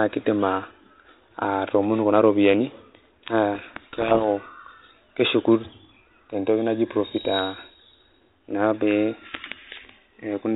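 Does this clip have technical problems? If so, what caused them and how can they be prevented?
Yes. From 3.54 to 4.28 s the speech is buried in harsh distortion. This is a codec payload misread. The two ends disagree on the bit order of the G.726 code words, so the decoder builds the wrong differences. The light coding hiss elsewhere fits G.726 at 32 kbit/s. Prevention: make both ends agree on the G.726 packing order during call setup, and test it.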